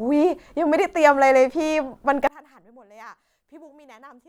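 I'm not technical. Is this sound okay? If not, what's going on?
No. One channel inverted, from about 2.27 seconds to the end: the speech suddenly drops to a faint trace. The likely cause is that one side of the stereo recording has been flipped upside down, so its waves push exactly against the other side's. When both sides are mixed into a single speaker, the voice, which sits equally in both, cancels itself out. Only the small differences between the two sides remain.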